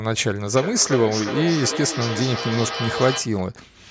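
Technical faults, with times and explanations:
0.57–3.48 s, feedback echo between two devices: the speech returns at a steady interval of roughly 400 ms, with the loudest repeat about 8 dB below the direct speech. A second device in the same room plays the call audio, and this microphone captures it again. The echo canceller only removes what its own device plays, so the returned sound passes through and comes back after each trip around the loop.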